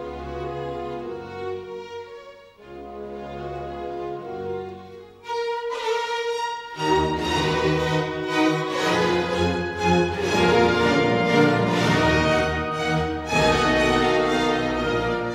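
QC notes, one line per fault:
No fault found.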